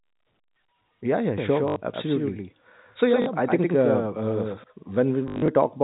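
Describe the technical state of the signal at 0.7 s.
At 0.7 s the signal is intact, with the G.711 telephone coding audibly limiting the speech to the band below 4 kHz.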